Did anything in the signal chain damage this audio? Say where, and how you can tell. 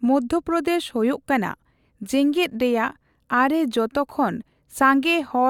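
No, nothing in the signal chain audibly damaged this speech recording. No stage, from capture through to playback, left a trace that can be heard.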